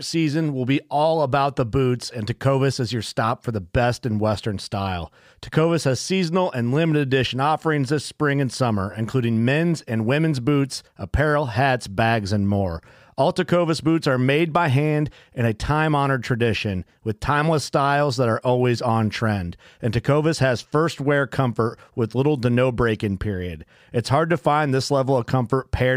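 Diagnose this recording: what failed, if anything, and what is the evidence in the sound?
Nothing failed; no fault is audible in the recording.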